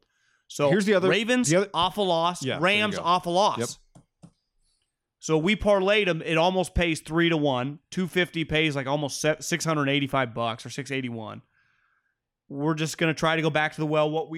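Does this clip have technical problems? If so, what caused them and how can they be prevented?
Yes. From 12.82 s to 14.37 s, the speech carries a 50 Hz buzz. It comes from a resampler restarted on every block. Each 20 ms block was converted alone, leaving a small error at every edge. Keep the resampler's state running across blocks to prevent it.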